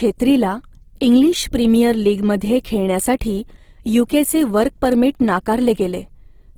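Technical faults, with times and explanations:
Throughout: Opus compression. The speech sounds rough and grainy, with noisy highs, likely from Opus music mode near 16 kbps filling starved bands with noise.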